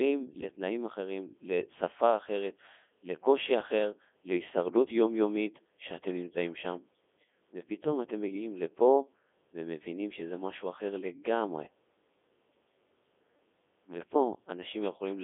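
Throughout, the speech sounds robotic and buzzy, confined to a narrow band from about 250 Hz to 3.5 kHz with nothing above 3.6 kHz. This is the Codec 2 vocoder, heavily damaging: only pitch, voicing and envelope survive, resynthesised from sine waves, consistent with its 3.2 kbit/s mode.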